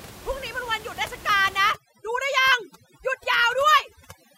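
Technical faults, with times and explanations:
1.72 s to the end at 4.37 s, overdone noise removal: from here on the background drops and breaks up into little twinkling specks. The noise reducer is set too aggressively, so any frequency band sitting close to its noise estimate gets pushed way down or off, taking the quieter bits of speech along with the room noise, which before this point sat about 19 dB under the speech.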